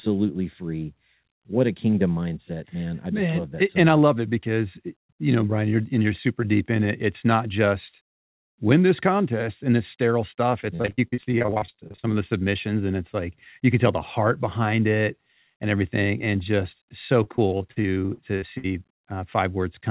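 From 10.76 to 12.06 s, and again from 17.24 to 18.66 s, the speech turns choppy and robotic, with pieces dropping out. This is repeated packet loss: each hole is patched by extending the preceding sound, and holes reach 46 ms and 58 ms.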